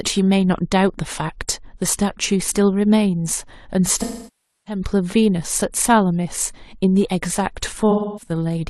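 AAC frame loss with concealment occurs twice: from 3.95 to 4.81 s, then 7.90 to 8.31 s. The decoder patches missing frames from the last good spectrum, so the speech smears into a noisy, phasey wash and, in the longer 640 ms gap, decays toward silence before fading back.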